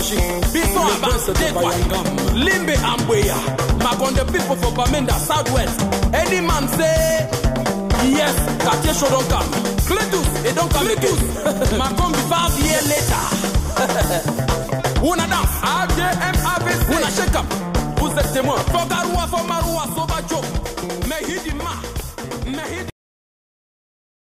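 The audio has a cut-off end. At 22.90 s the sound stops abruptly, mid-event rather than at a natural pause. There is no fade or decay. The signal falls straight to digital silence, which holds for the last 1.3 s of the clip. This happens when the final buffers of audio are never written or played out. The file or stream is closed before the tail of the sound reaches the output.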